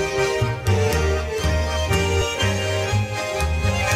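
At about 2.21 s compressed frames were skipped: a couple of frames never got played, so the audio jumps ahead by roughly 40 ms, which fits 20 ms frames.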